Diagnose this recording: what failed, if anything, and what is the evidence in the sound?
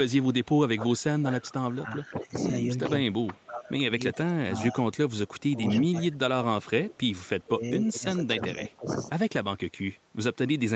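Speech suppressed in double talk, likely from the call's echo canceller ducking both directions: speech drops about 15 to 25 dB at 0.78–0.9, 1.23–2.31, 3.27–3.73, 4.12–4.78, 5.5–7.06 and 7.45–8.9 s.

Echo leak in call processing: a copy delayed about 0.39 s appears at 2.80–2.84 s, about 15 dB down, and faintly at 3.22–3.45 s, likely a far-end loudspeaker residual the canceller missed.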